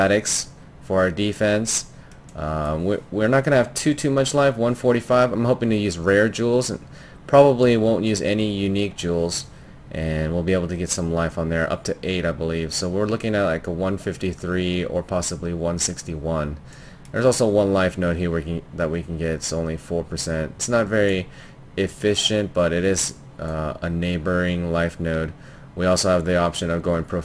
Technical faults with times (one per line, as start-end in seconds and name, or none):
0.00-27.24 aliasing